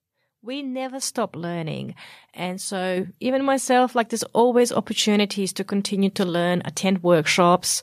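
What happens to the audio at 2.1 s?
Nothing goes wrong at 2.1 s; the speech carries on intact through that moment, with no dropout, click or other fault to be heard.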